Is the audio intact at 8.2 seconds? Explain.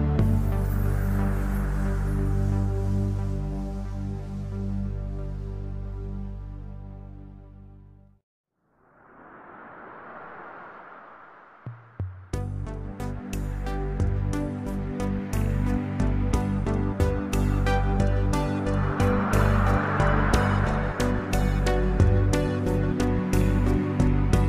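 Yes, the audio is intact at 8.2 seconds, with no dropout, click, distortion or other fault at that point.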